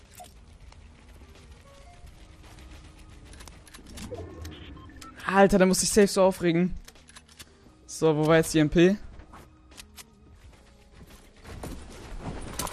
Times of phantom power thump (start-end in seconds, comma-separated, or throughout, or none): none